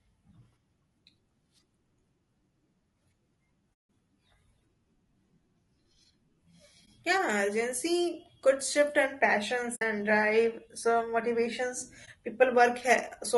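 It's a speech clip with a rough, grainy texture throughout, likely from low-delay AAC compression (AAC-ELD) at a low rate, maybe around 32 kbps, with noise between the harmonics. There's also AAC frame loss with muting, leaving soft-edged holes at 3.73–3.87 s (about 160 ms) and 9.75–9.82 s right after "could shift and", and brief dips at 6.85–6.88 s and 12.05–12.08 s just after "drive some motivations".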